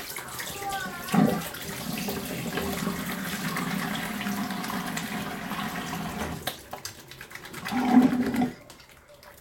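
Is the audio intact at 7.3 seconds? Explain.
Yes, at 7.3 seconds the audio plays through intact, with no dropout, glitch or other fault at that point.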